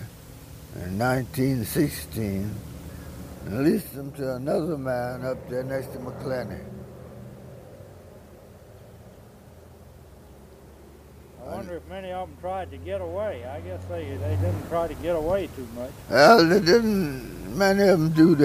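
From 3.25 to 3.99 s there's zipper noise. The level drops by about 10 dB, but instead of gliding down it goes in 1 dB jumps, around ten a second, with nothing smoothing between them. Each jump puts a tiny discontinuity in the waveform, so you hear a faint ticking or zipping riding on the sound for as long as the level is moving.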